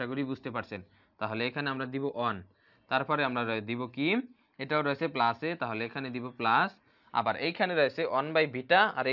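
No technical faults can be heard in this audio.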